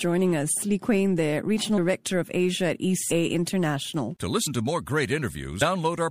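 At 1.77, 3.10, 4.46 and 5.61 s the speech jumps ahead by roughly 150, 200, 70 and 300 ms. These are compressed frames skipped: whole frames, fitting a length near 26 ms, went missing or were rejected by the decoder, leaving a brief smeared blip at each join.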